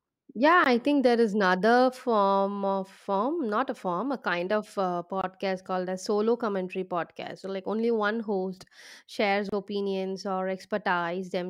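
Three brief dropouts cut into the continuous speech: a single 18 ms hole at 0.64 s, a 22 ms one from 5.21 to 5.24 s, and a 30 ms one from 9.49 to 9.52 s. Each has its edges smeared by the codec before the speech picks up exactly where it left off. These are gaps at a join of encoded pieces: separately encoded segments were spliced without removing each run's leading silence and end-of-stream padding.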